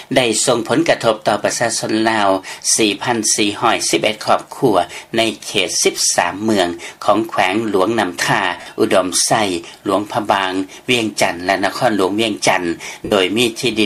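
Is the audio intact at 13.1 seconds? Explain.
No. From 13.05 to 13.12 s, about 67.5 ms, the sound turns into a brief noisy smear. These are lost LE Audio frames: the LC3 decoder replayed the last spectrum with randomised signs, consistent with nine 7.5 ms frames.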